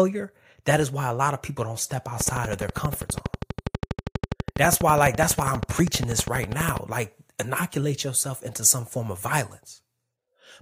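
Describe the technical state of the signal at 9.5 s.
At 9.5 s the speech signal is intact, with no audible fault at that moment.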